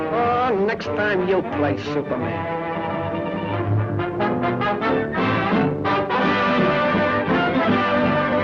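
No technical faults can be heard anywhere in this recording.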